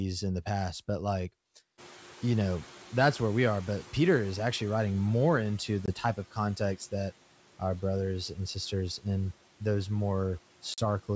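Speech carried over a wideband call, with a sound that fits G.722 coding at 64 kbit/s. Right after "the past but like", the noise suppressor is catching up. Room noise jumps by about 24 dB near 2.0 s. From 1.77 to 5.14 s, that noise comes through with too little reduction. The suppressor's noise estimate lags the rise. Over about 3.4 s it adapts, and the noise sinks by about 9 dB. Two bursts of packet loss on an ADPCM call follow. There is a 20 ms hard-edged hole at 5.86 to 5.89 s, about one packet. A 40 ms hole follows at 10.74 to 10.79 s, about two packets. Each gap is filled with silence. The decoder's predictor and step size then no longer match the sender's. Speech resumes with brief distortion, settling within tens of milliseconds.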